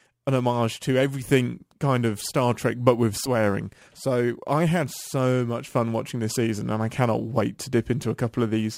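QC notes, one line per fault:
Throughout: crude rate conversion. The speech has a gritty, inharmonic fizz riding on it, loudest on strong syllables and sibilants, which fits a change from 44.1 kHz to 48 kHz done by simply repeating the nearest sample instead of filtering. The resulting timing error repeats in a fixed cycle and throws off tones that have no harmonic relation to the voice, sitting roughly 30 dB below it. Unlike steady hiss, it tracks the signal and vanishes in pauses.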